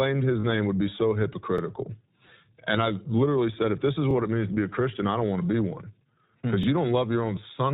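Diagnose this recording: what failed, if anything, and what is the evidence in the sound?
The codec stage is the root of the constant coloration: the speech has passed through the iLBC codec, a narrowband VoIP coder that handles each frame's excitation independently. Nothing above 4 kHz survives, so the speech sounds boxed-in and band-limited for the whole clip, with a plainly audible rough, slightly synthetic texture. That texture fits iLBC's 20 ms frame mode at about 15.2 kbps, where each short block is rebuilt from a coarse excitation model.

On the network side, lost iLBC frames leave two brief gaps that the decoder papered over. From 0.40 to 0.45 s, about 40 ms (two frames' worth) went missing. At 2.26 to 2.29 s, a single 20 ms frame was lost. In each gap the decoder repeats the last pitch cycle blended with noise, so you hear a short held, faintly buzzy vowel. Since iLBC frames stand alone, the speech snaps back cleanly right after.

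In the buffering or transport stage, overlapping chunks cause a regular stutter. The audio was handled in 2.5 s blocks, each starting about 25 ms before the previous one ended, so that slice is played twice at every join. The repeats land at 1.58 to 1.61 s, 4.11 to 4.13 s and 6.63 to 6.66 s, evenly spaced 2.5 s apart. Each is heard as a click or hiccup where the doubled audio is spliced back in.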